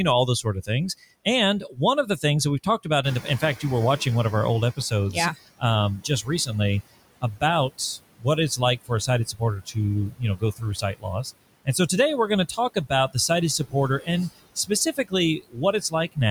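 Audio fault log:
Throughout: noise suppressor artifacts. The suppressor lowers the bands it judges to be steady noise by about 21 dB, frame by frame. The background dips between phrases and returns under the speech.
0.27–0.70 s, 1.25–4.06 s, 4.77–6.50 s, 7.21–11.68 s, 12.56–16.18 s: speech cut by the noise suppressor. Soft consonants and word endings were classified as noise and pulled down with the background, by up to about 13 to 21 dB, and sound swallowed or faint.
3.03–4.79 s: noise suppressor catching up. The room noise jumps by about 15 dB near 3 s. The suppressor's noise estimate lags, so the louder background passes with less reduction at first, then settles to about 13 dB of reduction over 1.76 s.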